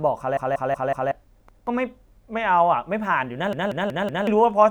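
At 0.37 to 1.12 s the speech stutters as a repeated buffer. A roughly 186 ms piece, which fits an 8192-sample buffer, plays four extra times because new audio arrived late, losing about 0.7 s. At 1.49 to 1.67 s one piece repeats once, and at 3.53 to 4.27 s the piece again plays four extra times. On a spectrogram, identical blocks tile side by side with vertical seams at each hard join, and the waveform shows the same shape copied end to end.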